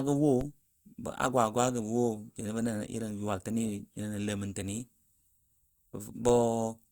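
A low thump at 0.41 s and another at 6.29 s are DC steps: the waveform's zero line jumps abruptly, then drains away through a 20 Hz high-pass while the speech continues untouched.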